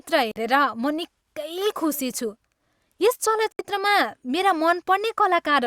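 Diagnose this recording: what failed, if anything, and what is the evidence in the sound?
Bluetooth dropout, at 0.31 to 0.36 s and again at 3.52 to 3.59 s: the speech cuts to silence for about 46 ms and then about 70 ms, and picks up later as though it had kept playing underneath. The stage is the wireless link to playback, and the likely cause is audio packets arriving too late at the headphones and being discarded. The gap lengths fit two and then three lost packets.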